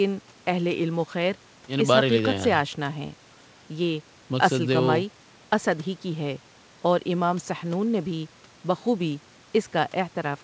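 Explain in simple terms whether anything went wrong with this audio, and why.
Nothing went wrong here: the speech came through an ordinary G.722 call path, which carries nothing above 8 kHz, and that upper limit is simply how this kind of call is built rather than a fault.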